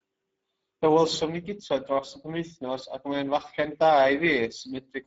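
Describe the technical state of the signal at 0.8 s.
At 0.8 s, Speex codec damage, present throughout: starved CELP excitation makes the speech hoarse and noisy, consistent with roughly 10 kbps. A spectrogram shows a hard ceiling at 7.6 kHz.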